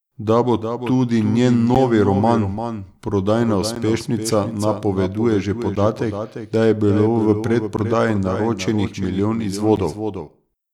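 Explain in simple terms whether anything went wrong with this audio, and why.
Two things went wrong with this speech recording.

Throughout the clip there is a doubled audio track: a second, noticeably quieter copy of everything follows about a third of a second behind, most likely because the sound was captured twice, once through a slower path. Unlike a room echo, it doesn't fade away or sound roomy. It is one clean, identical copy running at a fixed delay for the whole clip.

There are also periodic USB or driver dropouts. Starting at 1.75 s and continuing to about 9.77 s, the sound cuts out briefly every 2.0 seconds, about five times, each a tiny hole of silence roughly a hundredth of a second long. This happens when something on the computer repeatedly stalls the audio connection. These ticks are perfectly evenly spaced and occur only while there is sound, not at random like dust crackle or an occasional glitch.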